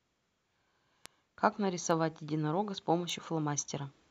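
Three bit error spikes tick through the speech at 1.06 s, 1.91 s and 3.10 s, peaking at about -22, -34 and -22 dBFS. A flipped bit throws one to three samples off by a power of two, which shows as a needle one to three samples wide on the waveform and a thin full-height vertical line on the spectrogram.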